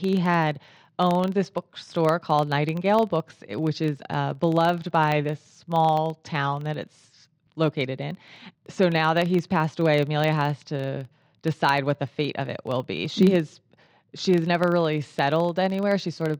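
Throughout the speech, a filter restarted on every block leaves a 23.4 Hz buzz, which fits a 2048-sample buffer; unlike mains hum, it rises and falls with the speech level.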